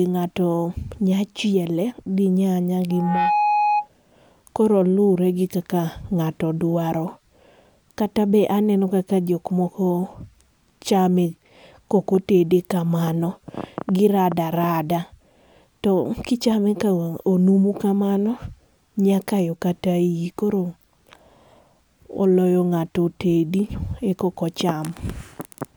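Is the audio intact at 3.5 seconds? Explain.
No. A loudspeaker feedback squeal runs from 2.90 to 3.89 s: the microphone picks up its own loudspeaker, and at 834 Hz the loop gain exceeds one, so a pure tone swells within about a third of a second to roughly the speech's level.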